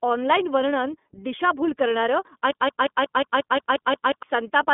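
From start to finish the speech sounds boxed-in, slightly rough and synthetic, with nothing above about 3.7 kHz and a thin low end from a line band of roughly 200 Hz to 3.5 kHz. This is the iLBC codec. It codes each 30 ms frame's excitation independently of the previous frame, and the plainly audible damage fits its 13.33 kbps mode. The codec keeps the speech clear but strips away its brightness and smoothness.

Right after "ऑनलाइन वर्णन दिशाभूल करणारं", from 2.51 s to 4.23 s, the audio stutters in a broken-record loop. A 179 ms fragment repeats exactly, back to back, ten times, so the same short sound cycles mechanically for almost two seconds. Whatever should have played during that stretch is gone. The likely cause is a stalled player, encoder or stream that kept re-sending the last piece it held.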